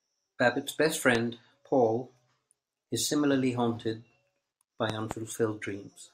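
A sudden voltage spike, likely from a plug, switch or static discharge, enters the signal chain and is shaped into a loud pop. One strikes at 1.15 to 1.18 s and a double pop spans 4.90 to 5.13 s, both about 15 dB above the speech, which continues underneath.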